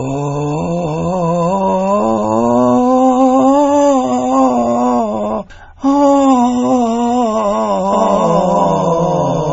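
MP3 compression runs throughout this music clip: nothing survives above 7.7 kHz, and the heavy, watery swirl with chirpy highs and softened attacks fits a low bitrate near 24 kbps, where the encoder likely starved weak frequency lines and cut the treble. A doubled audio track enters abruptly at 7.93 s and lasts to the end. A second full-band copy, about as loud as the original, trails it by roughly 0.7 s with no room colour, likely from a second capture path or an overlapping edit.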